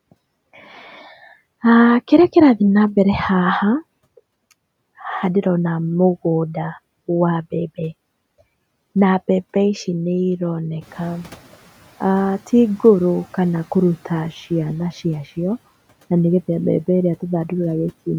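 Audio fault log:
10.81–11.66 s, noise suppressor catching up: room noise jumps near 11 s, comes through with less reduction at first, then sinks by about 8 dB over 850 ms as the estimate adapts.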